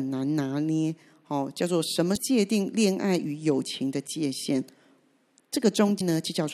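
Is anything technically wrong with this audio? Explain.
Yes, there's damaged data in the compressed stream, at 2.13 to 2.18 s and 5.97 to 6.01 s. Corrupt frames throw the decoder off sync, so each spot gives a brief chirp, squawk, click or short hole in the speech.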